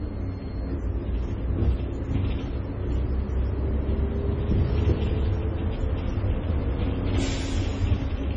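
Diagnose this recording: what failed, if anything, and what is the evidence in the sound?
The codec stage failed: low-bitrate audio saved at a high bitrate. Throughout the sound, nothing exists above 10.3 kHz. That hard ceiling and the smeared detail point to a very low-bitrate MP3 pass, likely re-encoded at a high bitrate. The second encoding cannot restore the removed content.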